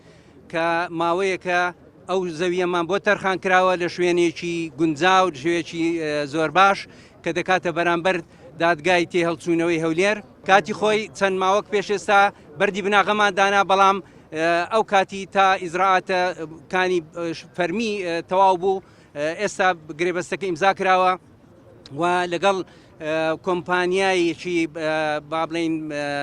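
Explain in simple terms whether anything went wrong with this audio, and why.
Nothing went wrong with the audio here; no technical faults can be heard anywhere in it.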